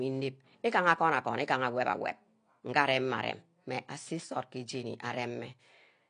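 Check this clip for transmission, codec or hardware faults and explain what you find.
One codec fault runs through the whole recording. The speech was likely passed through AAC compression at a low bitrate, with damage consistent with AAC-LC at around 32 kbps. Starved of bits, the encoder dropped all content above 9.8 kHz and quantised the remaining spectrum coarsely. The voice therefore sounds dull and clearly smeared, with a fizzy, warbling texture on sustained sounds and sibilants from start to finish.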